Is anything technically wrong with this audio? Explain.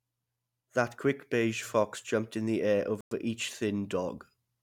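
Yes. From 3.01 to 3.11 s the speech drops out to total silence for about 106 ms, then carries on. This is likely a Bluetooth stall: interference delayed the wireless packets, the headphones' buffer emptied, and playback halted until retransmitted audio arrived.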